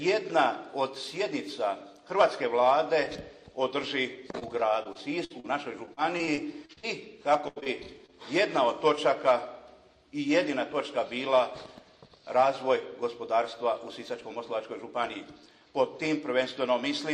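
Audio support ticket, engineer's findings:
Short concealed packet loss at 4.31–4.35 s, 4.39–4.43 s, 7.60–7.64 s, 7.64–7.68 s and 8.06–8.10 s. Each is a brief smear or wobble where about 20 ms of audio never arrived in time. Component: network path into the receiver's jitter buffer. Mechanism: decoder concealment extends the previous sound, pitched or as shaped noise, then crossfades back into real audio. Short transients inside these windows may be lost.

Repeated packet loss (robotic sound) at 4.83–5.46 s (4 gaps, about 140 ms missing, longest 52 ms, roughly a fifth of the span concealed) and 5.86–6.96 s (8 gaps, about 240 ms missing, longest 41 ms, about 22% concealed). Choppy texture with chunks absent. Component: sustained transport loss or late arrival. Mechanism: consecutive holes patched by extrapolation before the decoder recovers, so the concealment artefacts stack.

Burst of packet loss at 7.48–7.58 s, about 80 ms missing in one run. 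Audible as a held buzz or fading hiss, then a jump forward. Component: network burst loss upstream of the jitter buffer. Mechanism: the decoder continues the last frame with decaying gain across the gap, and the content in between is lost. Two short concealed losses follow immediately at 7.60 s and 7.64 s, pointing to the same loss episode.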